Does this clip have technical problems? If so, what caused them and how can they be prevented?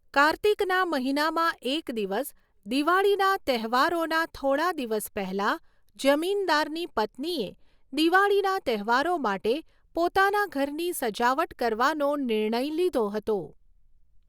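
Yes. From 6.42 to 9.84 s the speech shows channel delay (comb filtering). One channel lags by roughly one sample, about 0.02 ms, so mono summing cancels near 20 kHz. This dulls only the extreme top, a gradual sag into a single notch rather than the steep wall of a low-pass filter or the hollow midrange of longer delays. Time-aligning both channels before summing to mono prevents it.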